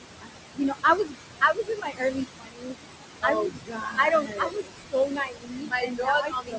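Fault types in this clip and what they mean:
Noise suppressor artifacts: the suppressor treats the steady room noise as unwanted and pulls it down by about 21 dB, frame by frame, wherever no speech covers it. On a spectrogram the noise floor blinks out between phrases and reappears under speech, leaving a patchy floor.
Speech cut by the noise suppressor: with room noise only about 6 dB below the speech, the suppressor mistakes parts of the speech itself for noise and drops them by about 20 to 22 dB. In the waveform, stretches of speech sink and turn faint, and the spectrogram shows matching holes.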